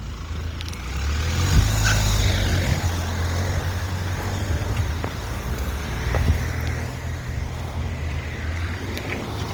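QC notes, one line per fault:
Throughout: Opus compression, likely in its CELT music mode. Tonal parts of the sound come out rough, grainy and noisy rather than swirling, with plainly audible damage. When bits run short, the encoder keeps each band's energy but fills the detail by folding lower bands or injecting noise. The bandwidth stays full, reaching about 20.2 kHz, so the roughness itself points to a low bitrate around 24 kbps.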